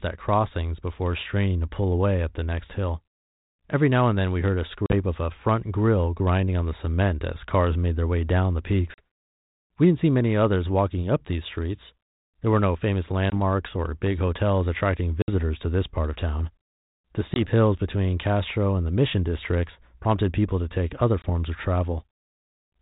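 Packet loss on an ADPCM call drops one to three packets at 4.86, 8.94, 13.3, 15.22, 17.34 and 21.22 s. Each gap of 20 to 60 ms goes hard-edged silent, and the speech returns briefly distorted.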